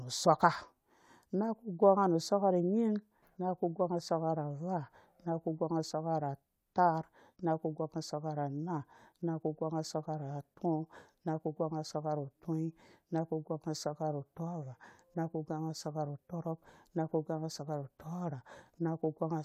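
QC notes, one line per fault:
No problems stood out on listening to this speech recording.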